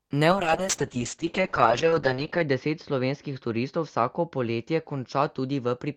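At 0.33 s there's a call bitrate drop that lasts right through to the end. The bandwidth estimate collapses and the encoder goes from around 40 kbps down to 7 kbps, bottoming out for about 2.1 s. At that rate it codes the speech much more coarsely and the audio bandwidth shrinks from 20 kHz to 8 kHz, so the top end disappears and the speech goes muffled, rough and watery.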